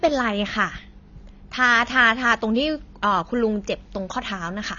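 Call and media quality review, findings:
AAC compression, throughout. Speech band-limited, nothing above 7 kHz; dull, smeared, warbling fizz on sibilants. Likely low-bitrate AAC-LC encode, consistent with about 24 kbps: coarse spectral quantisation leaves holes and lowers the cut-off.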